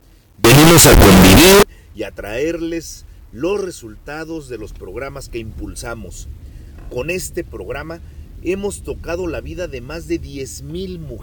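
From 0.44 to 1.63 s the sound becomes loud, harsh and uniformly blaring, quiet moments included, likely a signed and unsigned mix-up flipping the top bit of the 8-bit samples.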